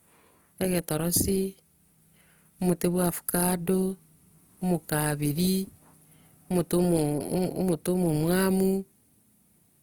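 Throughout, the speech sounds grainy and rough rather than swirling, with band energy kept up to about 20.2 kHz, likely Opus compression at a low bitrate near 24 kbps.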